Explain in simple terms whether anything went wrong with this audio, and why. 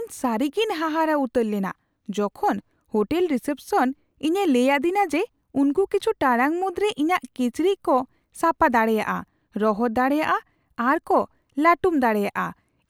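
Nothing stood out as going wrong when listening to this speech recording.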